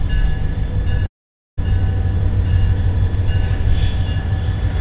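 From 1.06 to 1.59 s the sound smears into a fading buzz, then drops to silence before resuming; a long network dropout likely cut out about half a second of audio.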